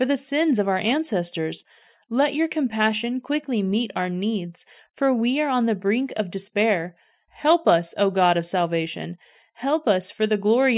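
Speech recording with no technical faults audible anywhere in it.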